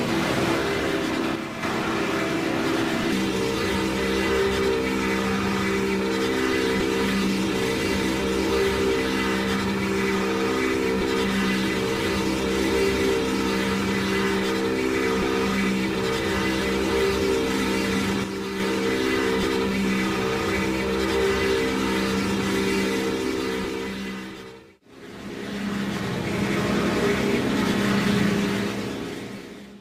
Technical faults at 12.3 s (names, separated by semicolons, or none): none